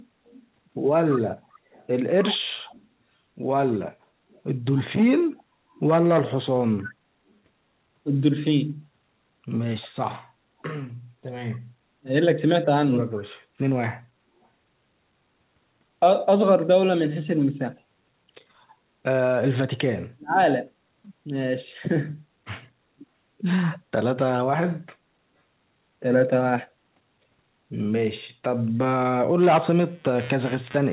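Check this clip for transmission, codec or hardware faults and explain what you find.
Three kinds of fault are present: echo leaking back, speech dropping out during double talk, and computer noise at the end.

Echo leak, 0.27–6.92 s, 13.15–13.23 s and 23.72–23.79 s: a far-end echo canceller likely failed to remove the loudspeaker pickup, so a copy of the speech returns 257 ms late, about 20 to 25 dB down.

Speech suppressed in double talk, 12.02–12.07 s and 20.12–20.40 s: with both sides talking, the canceller likely mistook the talker for echo and ducked it. This causes a brief dip of about 15 dB, then a near-cutout of about 40 dB lasting roughly 0.3 s.

Computer activity noise, 29.43 s to the end: processor or graphics load disturbs the shared audio ground, adding a buzz pulsing roughly 150 times a second, about 25 dB below the signal, through the narrowband G.711 audio.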